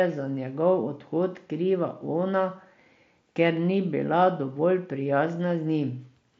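No technical faults can be heard; the speech comes through a Bluetooth headset link using the wideband mSBC codec, which limits it to roughly 8 kHz and adds a light graininess on the louder sounds.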